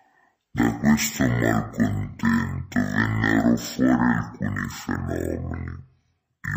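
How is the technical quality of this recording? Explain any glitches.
The technical quality is poor, with one fault running through the whole recording. It is a case of stereo read as mono: the left and right samples, which alternate in the file, have been played back in sequence as a single channel. Every stretch of audio therefore lasts twice as long, so the speech runs at half speed and sits a full octave (12 semitones) low, sounding slow and deep. On a spectrogram, the speech harmonics are compressed into half their normal height and stretched along the time axis, with a fainter mirrored copy of the pattern in the upper half of the frequency range. The waveform shows syllable envelopes drawn out to double length.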